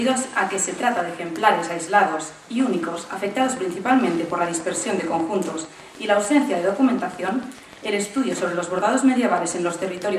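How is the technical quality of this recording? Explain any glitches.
The recording carries one clear fault: a train of clicks running from 2.83 s to 10.13 s. The pulses arrive at a steady 6.7 per second, around fifty in all, each with much the same sharp shape and reaching roughly the level of the audio itself. They tick through both louder passages and pauses. The regular spacing points to a periodic disturbance, likely electrical interference or an interface intermittently faulting, adding a near-identical transient on each cycle.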